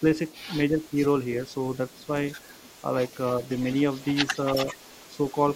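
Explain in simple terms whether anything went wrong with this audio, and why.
Yes, two things went wrong, both typical of a phone or video call where the far end uses a loudspeaker.

The first is an echo leak. From the start to 0.46 s, and again from 0.78 s to the end at about 5.6 s, a faint repeat of the speech trails the original by 338 ms, roughly a third of a second. It is very quiet at first and more noticeable from 0.78 s onward. The likely cause is the other side's echo canceller letting some of its loudspeaker sound back into its microphone. Room reverberation would be a smooth blur that follows the speech at once, but this is a distinct second copy arriving after a fixed delay.

The second is speech suppressed in double talk, between 0.7 and 0.97 s. The voice briefly sinks a little in level, in short patches adding up to about a sixth of a second, while sound from the other side overlaps it. 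This most likely happened because the echo canceller, hearing both at once, turned everything down to be safe. It differs from a network dropout because the speech never vanishes completely and nothing skips. The voice just dips slightly and then recovers.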